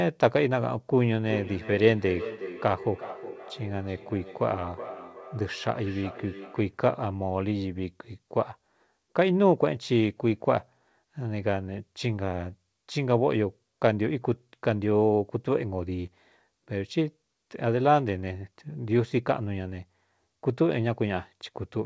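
Speech with a feedback echo between two devices from 1.18 to 6.83 s. Each phrase returns roughly every 400 ms, thinner and more ringing with each pass, peaking at about −13 dB below the speech. The likely cause is a second device in the room replaying the call, where the other microphone picks it up beyond its echo canceller's reach.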